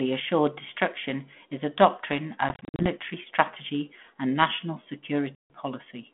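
Packet loss on an ADPCM call strikes twice in this speech. From 2.49 to 2.87 s, about 170 ms of audio drops out in gaps scattered over 300 ms, the longest 50 ms. From 5.35 to 5.50 s, a solid 150 ms hole follows, each burst pointing to around fifteen packets. The holes are silent and hard-edged. Because the decoder's predictor and step size drift from the sender's, speech re-enters each time slightly distorted, settling within tens of milliseconds, over the light, band-limited ADPCM texture typical of a 32 kbit/s G.726 line.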